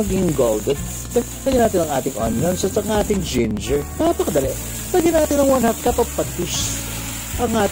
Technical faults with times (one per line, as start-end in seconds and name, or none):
0.10-7.66 periodic USB or driver dropouts